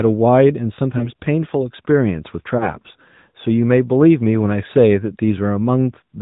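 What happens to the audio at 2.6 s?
At 2.58 to 2.70 s there is a lost AMR speech frame event. The decoder reused the last good pitch and vocal tract settings at reduced gain, which fits a single lost 20 ms frame. It sounds like a brief dip and warble, then rough recovery. On a waveform it shows as a short amplitude sag; a spectrogram shows smeared, flattened harmonics.

This sits within the AMR narrowband mobile codec coding heard throughout. Nothing passes above 4 kHz, so the spectrogram is empty above that line. The vocal tract model adds a plainly audible buzzy, synthetic quality, consistent with a rate near 10 kbps.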